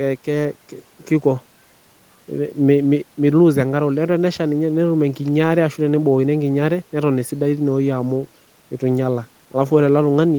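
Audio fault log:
No technical faults can be heard in this speech.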